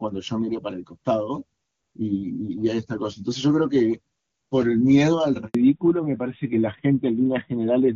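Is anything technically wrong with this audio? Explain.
Yes, there are two faults. At 5.47 to 5.55 s, a handover gap: the call switched networks and no frames arrived, so the speech drops out into 80 ms of silence. From 5.55 s to the end, a fallback to narrowband: the call left the clear HD Voice wideband codec for an older narrowband one, likely AMR-NB, so everything above 4 kHz vanishes and the speech turns duller and rougher.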